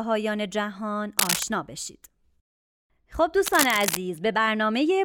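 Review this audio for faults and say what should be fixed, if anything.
Cable scratch noise occurs twice: 1.19 to 1.44 s, about as loud as the speech, and 3.45 to 3.97 s, a little quieter. Both are dense, uneven rustling bursts, likely from a worn connector whose contact resistance fluctuated. Replace or reseat the cable and secure it against movement.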